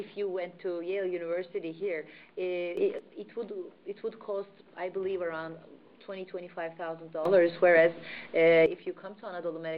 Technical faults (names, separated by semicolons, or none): sudden gain jump